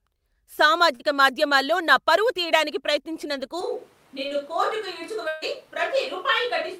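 Speech clip with three transport and capture faults. Between 0.95 and 1.12 s there is short concealed packet loss: about 40 ms of audio failed to arrive in time, and the decoder filled roughly 41 ms by extending the preceding sound before crossfading back into real signal. This is heard as a brief smear or wobble, and the content in that 40 ms is simply gone, with the timeline stretched by a few milliseconds. From 3.61 s to the end the sound abruptly turns roomy and hollow, with thinner low end, a level drop of about 5 dB and background noise sitting only around 30 dB below the speech. That sudden change in character is most likely a switch to a distant microphone, with the close mic's feed lost or dropped and a far pickup such as a camera mic carrying the rest of the recording. Within that section, from 5.28 to 5.44 s, there is a burst of packet loss. About 140 ms of audio is missing, and the receiver covered roughly 137 ms of it by continuing the last sound and letting it decay, so a voiced portion becomes a sustained buzz and unvoiced material a fading hiss. 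There is no true silence, but the speech jumps forward afterwards with that stretch lost.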